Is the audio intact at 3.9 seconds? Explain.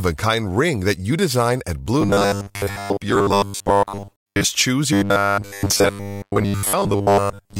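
No. At 3.9 seconds you're in the middle of robotic sound from repeated short buffers, running from about 2.01 to 4.44 s. The speech turns into a stiff metallic buzz locked at 100 Hz, still loosely tracking the words. The likely cause is audio arriving too slowly, so the playback keeps repeating a tiny chunk, which fits a 10 ms buffer, for most of that stretch while the real audio gets skipped.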